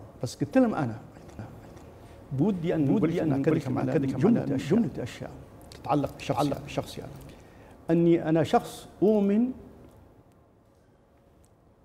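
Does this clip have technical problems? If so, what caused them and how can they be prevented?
Yes, there's a doubled audio track from 1.39 s to 7.31 s. A second full-band copy of the sound runs about half a second behind the original at roughly the same level, with no decay or room colour, so it reads as a clean echo rather than reverb. It starts and stops abruptly at those points. The likely cause is the same source being picked up twice, once through a slower path, or an edit leaving two offset copies stacked. To prevent it, route each source through a single capture path and check the timeline for overlapping duplicate regions before bouncing.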